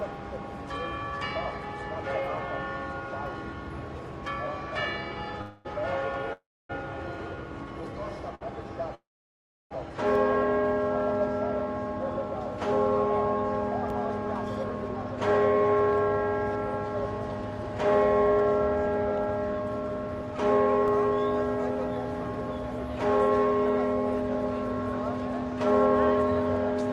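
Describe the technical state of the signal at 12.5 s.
At 12.5 s the signal sits inside a DC step lasting from 10.15 to 13.90 s: the waveform's zero line jumped to an offset. The shift itself is inaudible mid-span, but its onset lands as a low thump or click while the sound continues unchanged.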